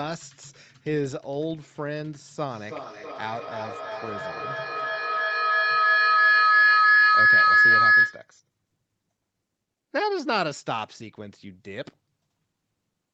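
An acoustic loop between two devices on the same call, each picking up the other's loudspeaker, gains level on every pass and produces feedback howl in this speech recording from 2.47 s to 8.34 s. The repeats swell rather than decay, narrowing to a tone of roughly 1.5 kHz that peaks about 10 dB above the speech and pulses about every third of a second, the loop's round-trip delay. The whole clip sits under an 8 kHz ceiling from the call path.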